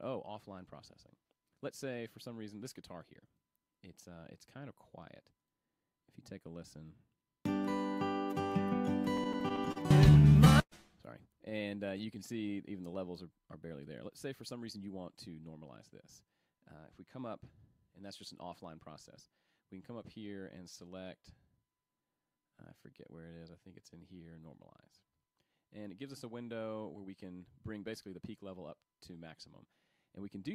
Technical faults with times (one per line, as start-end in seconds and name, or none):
9.17-10.73 repeated stalls (stutter)
11.49-11.53 short stall from a late packet
11.63-12.43 jitter buffer slow-down
14.52-15.52 jitter buffer speed-up
22.76-25.19 jitter buffer slow-down
27.00-30.18 jitter buffer speed-up